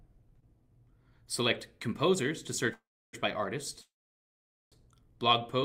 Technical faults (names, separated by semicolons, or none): call audio freeze